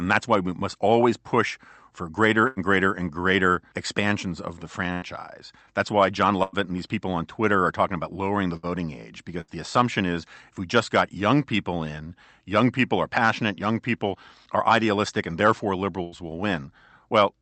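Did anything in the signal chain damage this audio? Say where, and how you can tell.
Yes. Network packet loss, 2.47 to 9.51 s, from after "always push for greater" to "the assumption is if": scattered short gaps, about five, longest near 100 ms. Concealment repeats sound, showing smeared, repeated spectrogram slices.

Jitter buffer speed-up, 13.96 to 17.41 s, after "people are passionate young": the receiver trims pitch periods, roughly 70 ms, running 102% speed. Waveform periods vanish without pitch shift.

Burst of packet loss, 16.03 to 16.18 s: 89 ms was filled by extending the last sound, fading. It appears as a flat, decaying band.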